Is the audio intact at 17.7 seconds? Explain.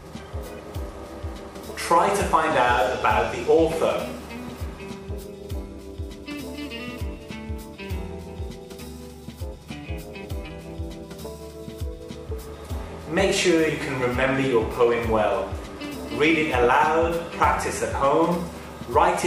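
No. From 17.73 to 17.75 s a corrupt frame is decoded: a couple of compressed frames arrive with flipped bits, and the decoder plays them anyway, so misread gains and codes put energy at the wrong frequencies. The result is a brief chirpy blip peaking around -25 dBFS. Unlike concealed packet loss, the sound doesn't smear. Wrong, foreign content briefly replaces it instead.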